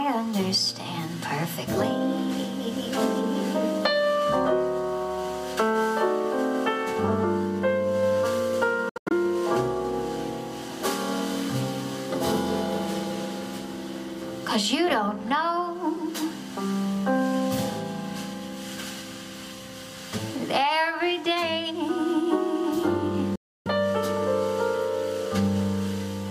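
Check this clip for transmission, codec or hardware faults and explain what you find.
Two gaps in the audio point to a likely Bluetooth dropout. From 8.89 to 9.12 s the sound breaks up in short holes, the longest 85.3 ms. From 23.35 to 23.68 s it goes silent for 298.7 ms. Late packets were discarded, so playback resumes further along, as if it had continued unheard.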